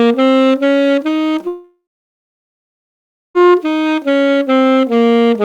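A recording of sounds carries a steady, even hiss throughout, roughly 45 dB below the signal, from low bit depth with dither, which fits 10-bit quantisation and shows as a flat noise floor across every frequency on a spectrogram. From 1.47 to 3.37 s the audio breaks off, most likely from a long network dropout. The last sound is carried on and fades, then about 1.5 s of near-silence appears as a flat waveform and a blank spectrogram band before the sound resumes with that stretch missing.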